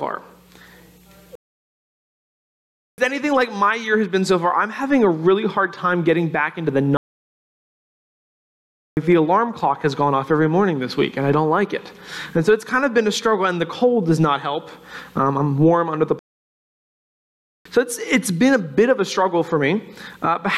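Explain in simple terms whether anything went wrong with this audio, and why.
Playback stall, three times: the sound cuts out at 1.35 s for about 1.6 seconds, at 6.97 s for 2 seconds, and at 16.19 s for about 1.5 seconds, then picks up again. The player likely ran dry of data and went silent until it caught up.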